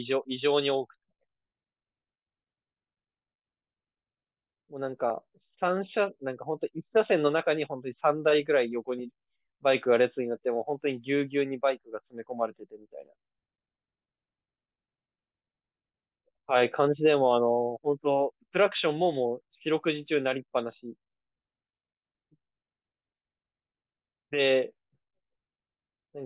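Recorded speech, with no technical fault to report anywhere in the clip. Nothing in the signal calls for a time or a cause.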